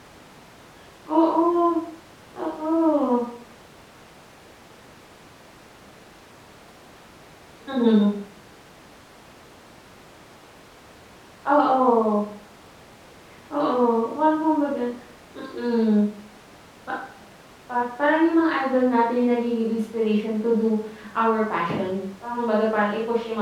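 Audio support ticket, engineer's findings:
No audible faults found in the speech recording.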